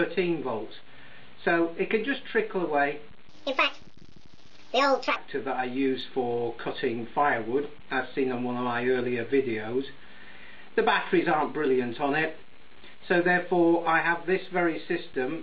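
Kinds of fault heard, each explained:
Section at the wrong speed: From 3.28 to 5.16 s the sound runs 1.53 times too fast, pitched about seven semitones higher. Likely a clock mismatch in playback or editing.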